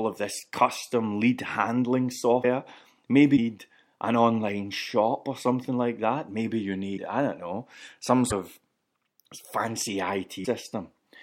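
Short glitches of about 30 ms interrupt the speech at 2.42–2.45 s (after "this custom lead handling"), 3.36–3.39 s, 6.96–6.99 s (between "like that maybe you" and "I don't know some"), 8.30–8.33 s (after "I don't know some") and 10.44–10.47 s. Each spans roughly one 26.1 ms frame, and the likely cause is a broken MP3 bit reservoir: with frames cut out, the next frame fetches borrowed data from the wrong bytes, so the decoder skips ahead and briefly outputs garbage.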